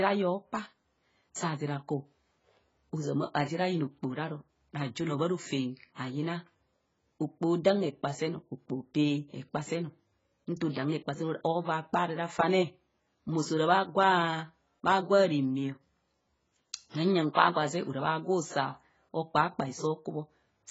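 Speech that sounds dull and smeared throughout, with a warbling, fizzy texture on sustained sounds and sibilants and nothing above about 7.7 kHz. The likely cause is heavy AAC compression, consistent with AAC-LC at a low bitrate near 16 kbps.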